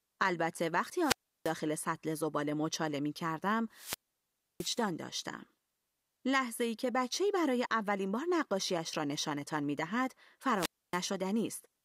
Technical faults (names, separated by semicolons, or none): wireless microphone squelch dropout